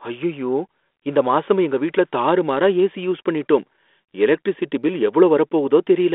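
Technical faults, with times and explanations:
Nothing here counts as a technical fault, just speech coming over a 32 kbit/s G.726 phone link with the narrow telephone band of roughly 250 Hz to 3.6 kHz you'd expect from it.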